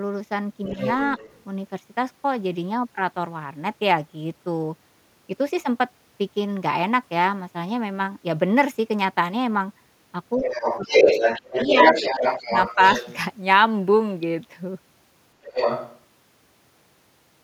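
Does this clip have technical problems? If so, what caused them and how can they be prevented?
Yes. The other side's voice leaking through can be heard at 0.65–1.43 s, roughly 10 dB below the talker, and at 10.42–13.16 s and 15.43–16.01 s at about the same level. It is likely loudspeaker sound that the echo canceller left in the microphone signal. Unlike a second person in the room, it is a separate, far-end voice. A better-tuned echo canceller, or a headset in place of the loudspeaker, would prevent it.

Speech suppressed in double talk appears as dips of up to roughly 25 dB at 10.36–10.54 s, 10.83–11.12 s, 11.42–11.77 s, 11.93–12.23 s and 12.75–12.79 s. These dips fall while the far side plays over the talker, which separates them from network dropouts. This is likely the canceller turning everything down. A full-duplex echo canceller with proper double-talk detection would keep the talker's voice intact.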